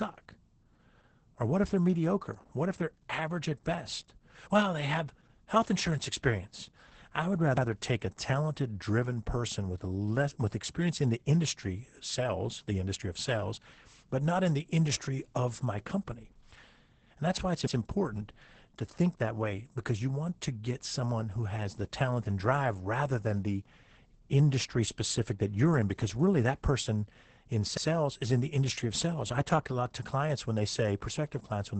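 Opus voice compression runs throughout the speech: the SILK linear-prediction coder at a rate that fits about 10 kbps keeps a wideband signal with nothing above 8.7 kHz and codes the excitation coarsely, leaving the voice muffled, hoarse and slightly robotic.

Overlapping chunks occur at 7.57, 17.67 and 27.77 s, after "insurance experience I would", "that's why it's" and "really that person in". Each 10-second chunk starts 100 ms before the previous one ends, so that slice plays twice, heard as a brief stutter.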